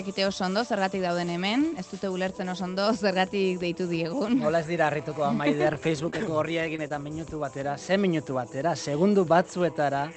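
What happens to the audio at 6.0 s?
Scattered short gaps run from 5.73 to 6.92 s, so 6.0 s falls inside the affected stretch. A few packets went missing or arrived late, about 60 ms of audio in all, and the receiver covered each hole by extending the preceding sound rather than leaving silence. The longest hole is only around 20 ms, so the sound stays clear but carries brief ticks, small smears and hiccups across that span.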